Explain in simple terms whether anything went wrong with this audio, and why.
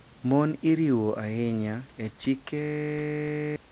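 Something clearly breaks near the end: from 2.62 to 3.56 s the sound turns into a flat, steady buzz. That's a system hang loop. The computer stalled while the sound hardware kept replaying the same 20 ms slice of audio, about 47 times over, and that quick repeat at 50 times a second is what you hear as the buzz. Around a second of real audio is simply gone. The muffled, phone-like tone throughout, with nothing above 4 kHz, comes from the call line.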